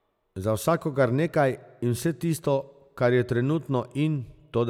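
Nothing goes wrong anywhere in this speech recording, so there's no fault to point to at any moment.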